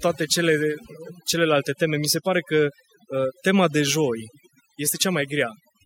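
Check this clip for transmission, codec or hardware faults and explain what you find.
One fault is present, and it runs through the whole clip. Overdone noise removal: an over-aggressive noise reducer mutes bands near its noise estimate, taking quiet parts of the voice with them and leaving a lowered background that breaks up into twinkling specks.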